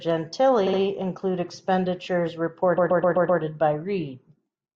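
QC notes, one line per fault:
0.66–0.79 s, repeated frames. A 64 ms slice of speech plays, then plays twice more back to back. It is heard as a short stutter. The same stretch of compressed frames reached the decoder more than once, and the decoder played it each time. The clip gains 128 ms.
2.77–3.41 s, repeated frames. A 128 ms slice repeats five extra times, which points to a run of several frames. The stutter is longer. It adds 640 ms to the clip.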